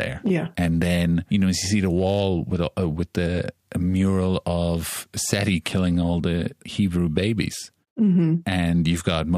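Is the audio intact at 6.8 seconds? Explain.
Yes, the audio is intact at 6.8 seconds, with no dropout, click, distortion or other technical fault at that point.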